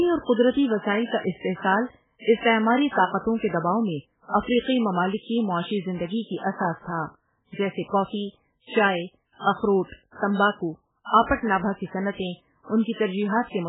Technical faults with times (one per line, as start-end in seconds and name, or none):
0.00-13.68 MP3 compression